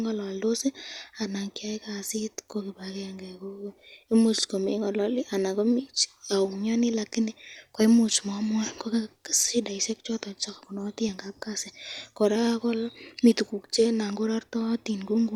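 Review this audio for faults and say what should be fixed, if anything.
At 11.08 s the speech jumps forward by roughly 30 ms, which fits about three missing 10 ms codec frames. These compressed frames were skipped because they were lost or rejected as corrupt. To prevent it, verify stream integrity in transmission and storage, and enable packet-loss concealment in the decoder.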